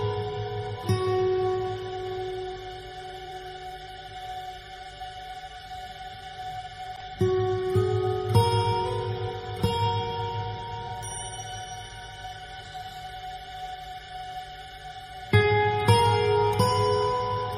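Brief smeared, noisy patches at 3.25 to 3.32 s, 6.28 to 6.34 s and 10.85 to 10.91 s come from AAC frame loss with concealment. Each gap, about 43 ms long, fits a single missing frame, which the decoder patched from the previous spectrum.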